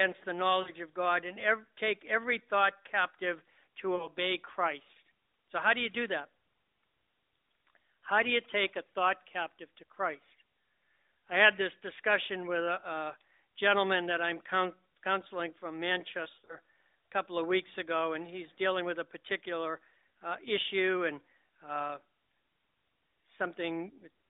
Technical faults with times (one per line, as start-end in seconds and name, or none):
0.62-0.71 lost AMR speech frames
3.96-4.10 lost AMR speech frames
16.24-16.56 lost AMR speech frames